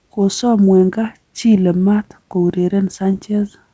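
Clock drift between sender and receiver runs through the whole clip. The sender's clock is about 2% slow, so the jitter buffer keeps draining. From 0.18 to 3.4 s, repeated timing corrections duplicate short pieces to keep playback fed. The speech plays at 97% speed and gains roughly a tenth of a second, heard as faint hiccups and an unsteady tempo over the G.722-coded audio, which has nothing above 8 kHz.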